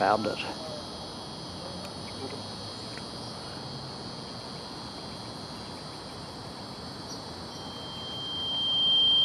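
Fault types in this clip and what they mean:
Loudspeaker feedback squeal: a single 3.2 kHz tone swelling over roughly a second and a half to about 15 dB above the sound, unlike a steady hum or whistle.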